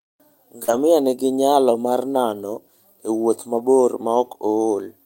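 Short concealed packet loss at 0.63 to 0.70 s: about 40 ms of speech arrived too late for the decoder, which filled roughly 43 ms by extending the preceding sound and then blending back into the real audio. This leaves a brief smear just before "nigi nyalo mar nano".

Lost packet rebuilt from error correction, overlapping at 0.68 to 0.78 s: about 60 ms was played from low-bitrate backup copies carried in later packets, which fits three lost packets. There is no gap, but the sound turns rougher and noisier. A single 20 ms rebuild at 3.58 to 3.60 s, after "mar nano e wuoth", has the same grainy texture.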